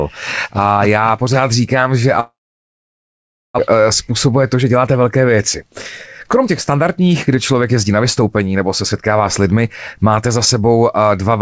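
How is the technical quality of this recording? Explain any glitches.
The recording has three glitches over a call path whose bandwidth stops at 8 kHz, consistent with G.722 at 64 kbps.

From 2.20 to 3.60 s the sound smears into a fading buzz or hiss, then about 1.2 s of silence. A long network dropout is the likely cause, with roughly a second of audio lost.

From 3.72 to 5.04 s and 6.40 to 9.12 s the audio runs hurried, at 108% and 107% speed with unchanged pitch. This is a jitter buffer speed-up: the receiver trimmed tiny pitch-period slices, about 0.1 s and 0.2 s in total, to work off the backlog.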